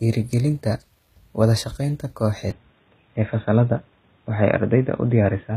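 Throughout, sibilants sound gritty and metallic with nothing above 14.9 kHz, likely HE-AAC compression rebuilding the treble by band replication, which fits a bitrate around 20 kbps. At 0.33 s a sharp snap cuts in, likely an electrical switching spike picked up on the line. From 2.51 s to the end, the speech turns dull and boxy with nothing above 3.8 kHz and faint new background noise, with no gap and no level jump, likely the input switched to a poorer device.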